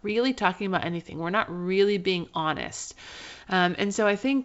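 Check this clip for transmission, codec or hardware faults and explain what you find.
Two bursts of bit errors on an ADPCM link: 0.76 to 0.86 s, after "really talking" and before "we're not really being", and at 3.75 s. Flipped bits derail the decoder's step size and predictor, giving rough pops with brief level jumps, consistent with a bit error rate of a small fraction of a percent on the G.722 wideband path.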